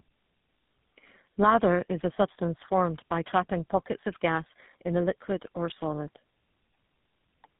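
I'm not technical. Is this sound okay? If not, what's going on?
No. Throughout, the speech shows tandem speech coding: two different phone compressors in turn left it rough, muffled and warbly, with nothing above 3.8 kHz.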